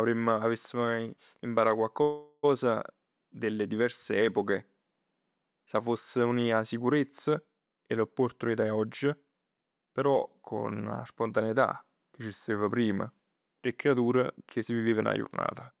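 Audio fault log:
2.02–2.45 s, call audio freeze: For about 0.41 s the sound stops moving forward and the last moment is stretched into a fading buzz, with a near-silent dip of about 10 ms before the sound resumes. Nothing is skipped; the sound picks up exactly where it stopped, now running about 0.41 s later. The likely cause is packets held up in transit, leaving the jitter buffer empty so the receiver filled the wait with a continuation of the last sound.
8.43–9.40 s and 14.86–15.18 s, jitter buffer speed-up: The sound hurries while the pitch stays the same, at 110% speed in the first stretch and 124% in the second. Roughly 100 ms and 70 ms of audio are removed, taken out as many tiny pitch-period slices in a row. This happens when the buffer has built up more delay than it aims for and trims it back quickly. The removals sit on top of the codec's 4 kHz band limit.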